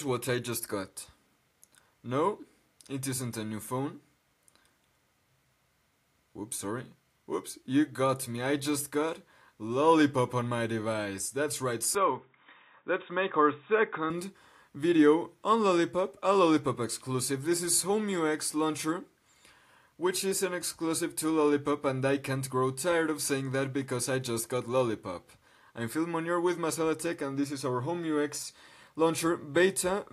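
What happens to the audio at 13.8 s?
An input switched to a poorer device, running from 11.95 to 14.10 s, is the likely cause of what happens at 13.8 s. The recording path moves onto a lower-grade input whose band stops near 3.8 kHz, so the sound turns dull and boxy with its upper detail gone. The switch comes with no gap and roughly no change in loudness, but a faint new noise floor, about 50 dB down, sits underneath until the original input returns.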